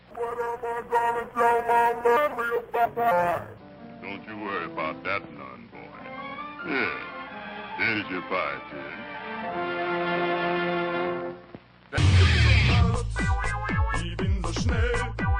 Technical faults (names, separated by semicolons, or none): skip ahead; jitter buffer speed-up